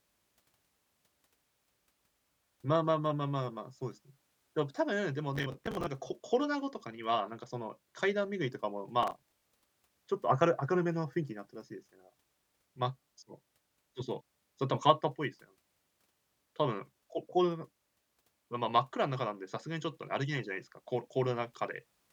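Processor overload crackle: the processor repeatedly missed its deadlines for short buffers of around 10 ms, replaying stale audio, so the speech tears into gritty crackle from 5.36 to 5.87 s and 9.03 to 9.64 s.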